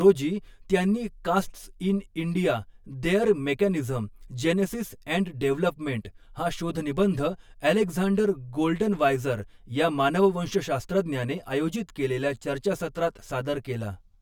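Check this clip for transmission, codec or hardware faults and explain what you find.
There is one fault: channel delay (comb filtering) across the whole speech clip. One channel runs roughly 10 ms behind the other, so summing to mono cancels energy at evenly spaced frequencies, starting near 50 Hz and repeating about every 100 Hz, leaving the voice hollow and phasey.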